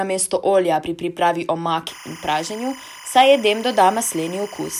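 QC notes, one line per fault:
1.87–4.79 s, timecode bleed. A steady chirping warble sits behind the speech until the clip ends, about 20 dB below it. Linear timecode at 25 frames per second has leaked in. Its square wave flips between tones near 1 kHz and 2 kHz.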